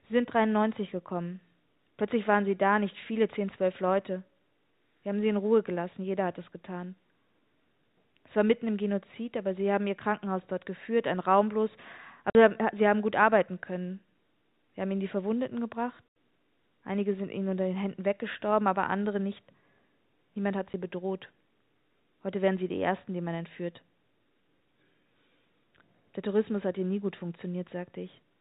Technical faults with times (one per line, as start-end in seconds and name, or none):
12.30-12.35 packet loss filled with silence
16.09-16.11 packet loss filled with silence
20.73 packet loss filled with silence